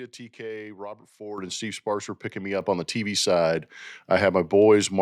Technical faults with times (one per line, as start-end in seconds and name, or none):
1.38 microphone volume stepped up
2.61 microphone volume stepped up
3.63 microphone volume stepped up